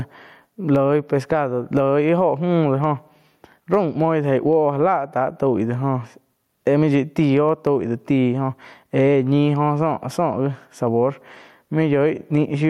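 Gain pumping runs through the whole speech recording. Each time the talker speaks loudly, the level drops. The swing is around 10 dB. Loud and quiet passages sit too close together, and the sound feels squashed. The likely cause is input gain set far too high, with a fast limiter clamping down on each peak.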